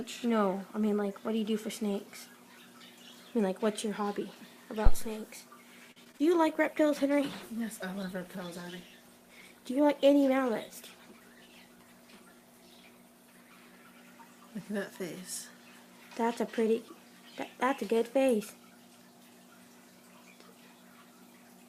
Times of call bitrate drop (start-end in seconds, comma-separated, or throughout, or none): 6.49-16.28